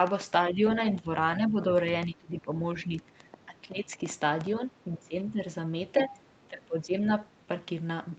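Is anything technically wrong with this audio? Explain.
Yes, two faults are audible in this speech.

From 0.07 to 4.47 s a train of clicks ticks over the sound, including pauses: about 30 pulses at an irregular 6 per second, peaking roughly 10 dB above the speech. This is likely interference or a faulty connection. On a waveform they show as sharp spikes, and on a spectrogram as thin vertical lines.

Speech suppressed in double talk dips the voice at 0.51–0.63, 0.92–1.09, 1.37–1.67, 2.06–2.55, 2.85–4.0, 4.59–5.4, 6.02–6.16 and 6.48–7.09 s. It drops by around 10 to 15 dB. The likely cause is an echo canceller ducking the talker while the far side spoke. These show as hollowed envelope sections and faded bands, within a spectrum that stops at 8 kHz from the call microphone processing.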